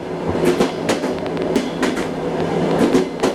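Compressed frames skipped at 0.35 s: the audio jumps ahead by about 200 ms, which fits roughly two frames of about 93 ms each going missing or being rejected by the decoder.

A train of clicks runs from 0.69 s to 3.21 s: about twenty similar pops at an uneven pace, averaging around six per second and peaking about 10 dB above the surrounding sound. They tick through quiet moments too, and are likely caused by nearby electrical interference or a faulty connection or power supply.

A second compressed frames skipped fault comes at 1.56 s, inside the click train. This time about half a second of audio is lost, pointing to roughly five dropped frames, and the sound lurches forward.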